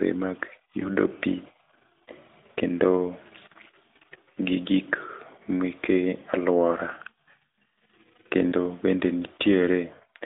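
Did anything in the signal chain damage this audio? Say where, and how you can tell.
Yes: lost AMR speech frames on the radio link, heard as dips or warbles at 0.80–0.90 s, 6.72–6.77 s and 8.50–8.54 s, each fitting one lost 20 ms frame. The decoder repeated the last good pitch and vocal-tract settings at lower gain, giving a soft smear rather than a buffer dropout's click or silence.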